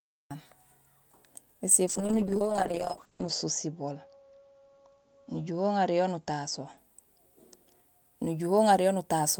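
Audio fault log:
0.00–0.31 s: cut-off start. The speech opens on digital silence, then enters abruptly at 0.31 s partway through a sound, with no natural attack or fade-in. The recording evidently began late, truncating the onset.
1.88–6.83 s: call bitrate drop. The speech turns rough and watery, and the top end falls from 20 kHz to 8 kHz, which fits the encoder being throttled from roughly 40 to 8 kbps. It stays at its worst for 1.42 s before recovering.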